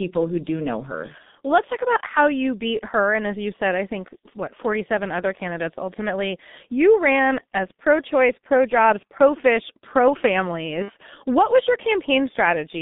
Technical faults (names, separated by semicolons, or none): G.723.1 codec; VoIP packet loss concealed by the speech codec